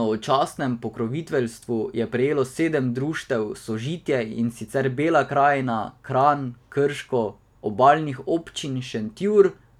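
A speech recording with nothing technically wrong with it.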